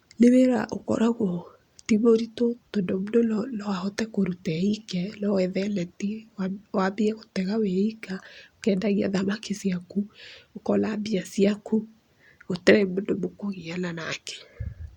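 There are no technical faults to describe anywhere in this speech recording.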